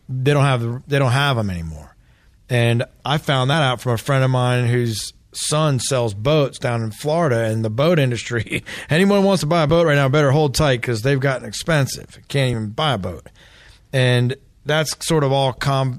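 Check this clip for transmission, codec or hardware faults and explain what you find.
Two short skips break the speech, each heard as a jump in the sound. The first is at 9.70 s, after "wants to buy a" and before "right now better hold", and loses about 30 ms. The second is at 11.65 s, after "tight because they've gotten", and loses about 10 ms. There is no gap, just an abrupt join. The likely cause is a dropped buffer (overrun), where audio was overwritten before being read and the surrounding audio closed over the missing piece.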